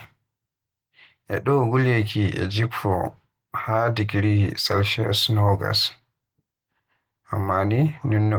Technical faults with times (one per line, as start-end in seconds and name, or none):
none